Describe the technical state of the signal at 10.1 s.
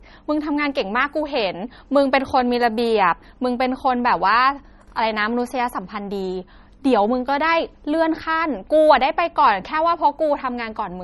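At 10.1 s the speech carries the same fault heard across the whole clip: low-bitrate audio saved at a high bitrate. Nothing is present above about 11.8 kHz. The sound is dull and smeared, with the swirly roughness of heavy compression. The file was likely encoded first as a very low-bitrate MP3, around 33 kbit/s, then re-saved as a high-bitrate MP3. The second pass kept the damage. It could not restore anything.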